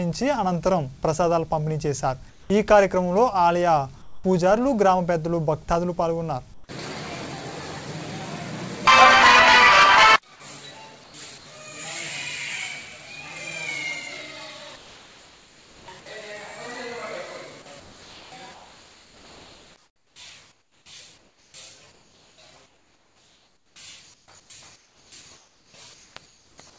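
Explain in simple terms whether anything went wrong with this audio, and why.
Yes, a few things went wrong, all tied to the way the call decides when to send sound.

Sound dropped by the voice detector: At 2.30–2.50 s, 4.02–4.24 s and 11.38–11.46 s, part of the sound briefly disappears and a flat hiss takes its place for about a fifth of a second or less. The likely cause is the sender's voice detector mistaking the quiet end of a sound for background and pausing transmission. The listener's side filled the gap with artificial noise until the detector switched back on.

Comfort noise in place of the background: During the quiet stretches at 6.54–6.68 s, 11.04–11.46 s and 14.76–15.88 s, the natural background is swapped for a smooth, even hiss. In the longest of these, just over a second, the hiss is also a bit quieter than the real room sound. This likely happens because the sender stops transmitting when it hears nothing worth sending, and the receiver plays a synthetic stand-in shaped roughly like the background.

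Sound chopped by the voice detector: From 17.62 s to the end, the sound keeps cutting in and out. About six seconds of this final stretch end up replaced. The likely cause is the voice detector toggling on and off repeatedly, each time swapping real sound for filler noise. The call's sound also carries nothing above 8 kHz, which comes from the codec.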